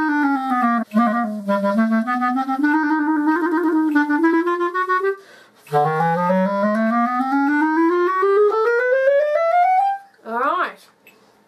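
At 0.82 to 0.84 s, and again at 4.32 s, there is damaged data in a compressed stream. Corrupted bytes make the decoder misread frames and lose sync while it hunts for the next frame header. Each event is a brief chirp or blip cutting through the sound.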